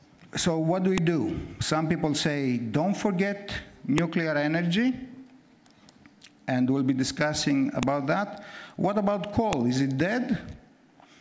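The audio carries four sharp, loud clicks at 0.98, 3.98, 7.83 and 9.53 seconds, each a file header played as audio. Separate WAV pieces were joined without stripping their headers, so a few dozen bytes of header data are played back as samples at every join, snapping through regardless of the surrounding signal. On a waveform each appears as a spike lasting only a couple of milliseconds; on a spectrogram, as a thin vertical line spanning the full frequency range.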